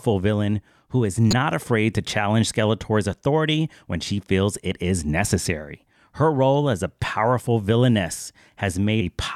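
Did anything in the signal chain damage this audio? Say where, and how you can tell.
Yes. Damaged data in the compressed stream shows up as a brief blip from 1.31 to 1.33 s, between "villain who is" and "afraid to challenge". Corrupted bytes at that point made the decoder misread frames and lose sync until it found the next valid header.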